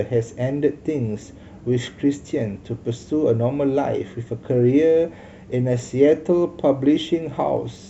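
Speech runs throughout with a block size mismatch (truncated): the tail of each block is discarded, leaving a steady 46.9 Hz buzz consistent with 1024-sample blocks, while speed stays normal. A spectrogram shows evenly spaced vertical seams about 21 ms apart; the waveform shows matching abrupt jumps.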